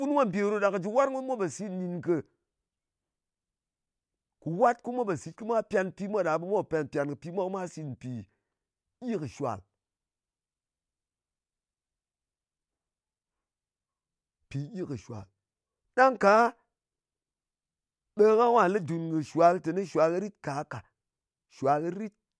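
No technical faults are audible.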